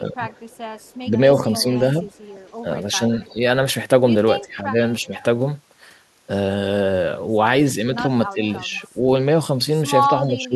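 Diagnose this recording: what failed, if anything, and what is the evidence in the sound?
Speech suppressed in double talk, a call-processing fault: the echo canceller likely could not separate the near talker from loudspeaker echo while both sides spoke, so it attenuated both. The speech dips by up to about 20 dB at 0.0–1.64 s, 2.63–3.42 s, 4.4–5.14 s, 7.96–9.0 s and 10.07 s to the end.

Echo leak, also in call processing: at the loudspeaker end, the echo canceller likely failed to remove everything its microphone picked up, and the remainder was sent back. A faint copy of the speech trails 331 ms behind, about 30 dB down, at 0.49–3.34 s, 4.89–5.23 s and 8.76–8.88 s.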